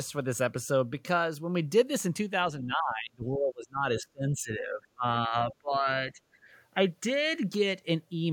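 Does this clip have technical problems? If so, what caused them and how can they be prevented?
Yes. The speech drops out from 2.65 to 5.05 s, up to around 25 dB down, and again at 5.28–5.34, 5.51–5.87 and 6.12–6.19 s. That's likely speech suppressed in double talk: the echo canceller ducked everything while both sides talked. Better double-talk detection or a headset prevents it.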